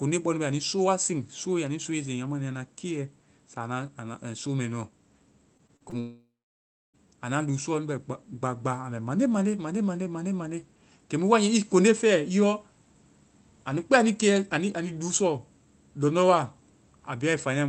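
From 5.57 to 5.94 s, repeated packet loss (robotic sound) leaves four short holes, the longest 36 ms, each patched by extending the previous sound, giving choppy speech with pieces missing.

From 6.00 to 6.96 s, a long network dropout likely wipes out about 0.94 s; a fading buzz or hiss gives way to 0.65 s of silence before "anua luu".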